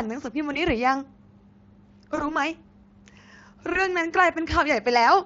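At 0.53, 2.15 and 3.73 s the speech briefly smears into a fading buzz. This is VoIP packet loss concealed by the speech codec, each gap fitting roughly one 20 ms lost frame.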